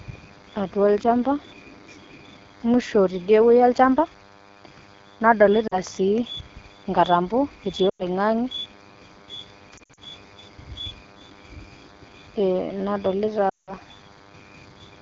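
DECT cordless phone buzz runs through the whole 15-second recording: a thin, steady 100 Hz buzz with a dense stack of harmonics, sitting about 30 dB below the speech. A DECT handset or base nearby transmits a short radio burst every 10 ms, and some part of the audio chain rectifies that RF into the signal, so the burst rate turns into an audible buzz.

AMR wideband (HD Voice) codec damage is also present throughout and is plainly audible. The speech sounds rough and raspy, which fits the low 8.85 kbit/s mode of AMR-WB. Below 6.4 kHz the codec rebuilds speech from a pulse-excited vocal tract model. At a rate this low that model is coarse, and the band from 6.4 to 7 kHz is only synthetic shaped noise, which gives the top end a hissy, artificial quality.

Lost AMR speech frames occur four times. At 5.67 to 5.80 s the sound drops quickly to near silence, consistent with roughly two lost frames. 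From 7.89 to 8.05 s the sound drops quickly to near silence, pointing to about 100 ms of missing frames. Between 9.77 and 10.02 s the losses are scattered across about 200 ms, with the longest run about 60 ms. From 13.49 to 13.73 s about 180 ms is gone, and the sound drops quickly to near silence. In each case the decoder repeated the last good pitch and vocal tract parameters with falling gain, which fades quickly in wideband, and the speech returns weak or rough for a moment.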